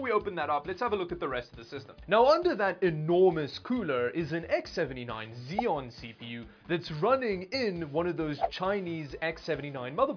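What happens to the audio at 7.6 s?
Nothing goes wrong at 7.6 s; the audio plays through that moment intact, with no audible fault.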